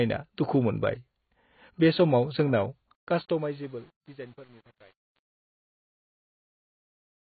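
Likely AAC compression at a very low bitrate, around 16 kbps, runs throughout, with heavy codec damage: nothing survives above 4.5 kHz, leaving the speech dull and smeared. From 2.95 s, truncation distortion on a fade appears: an undithered stage, consistent with 8 bits, turns the fading speech gritty, worst from 3.26 s onward.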